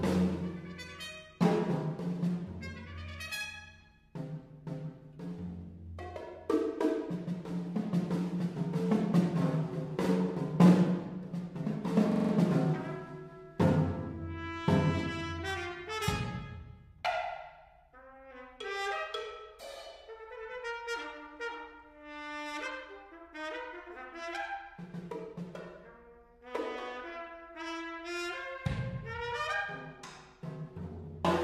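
From 12.12 to 12.33 s, a system hang loop repeats one 43 ms fragment exactly five times, a 23.4 Hz stutter fitting a 2048-sample buffer, unlike a dropout's silence.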